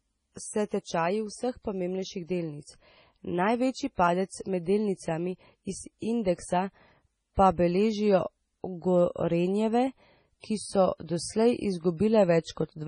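MP3 compression artefacts run throughout the speech: nothing survives above 10.5 kHz, and the sound turns watery and swirly with smeared attacks. The likely cause is an encoder starved of bits, which fits a low bitrate around 24 kbps, cutting the treble and flickering weak frequency lines.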